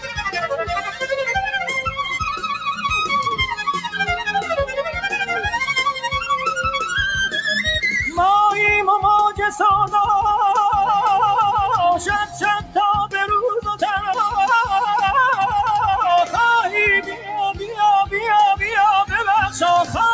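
A noise suppressor built for speech has been left on across this music or sound material, with the top of the band stopping near 8 kHz from the call's microphone processing. The suppressor treats sustained tones, ambience and tails as noise, swinging the level by around 10 dB. Attacks pass while held parts sink and flutter. This is not compressor pumping, which follows loudness rather than how steady the sound is.

Individual sounds cut by the noise suppressor sink at 0.0–0.21 s, 0.85–1.05 s, 12.26–12.43 s, 12.6–12.76 s, 13.66–14.1 s and 17.01–17.78 s. The drops reach about 8 to 14 dB, and the deepest is at 13.66 s. The sound dips and its decay shortens rather than vanishing, so these are not dropouts.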